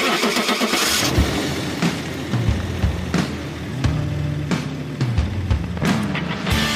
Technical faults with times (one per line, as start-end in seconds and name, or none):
5.52-6.64 train of clicks